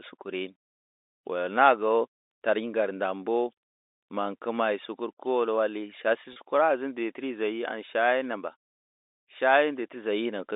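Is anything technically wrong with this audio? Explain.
Yes. At 6.33 to 6.36 s the speech briefly holds a slightly buzzy, frozen tone. This is packet loss with pitch repetition: about 30 ms of audio, which fits a single lost packet, went missing, and the receiver bridged the gap by repeating the last pitch period, heard through the 300 Hz to 3.7 kHz telephone band of the G.711 line.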